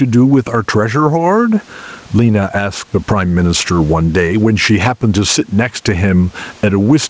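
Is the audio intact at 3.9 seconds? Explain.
No. Gain pumping runs through the whole clip, including 3.9 s. The input gain is likely set far too high, so a fast limiter clamps each loud syllable and releases in the gaps. The background swells and ducks by roughly 15 dB. On a waveform the envelope looks flattened, and on a spectrogram the noise floor brightens between syllables.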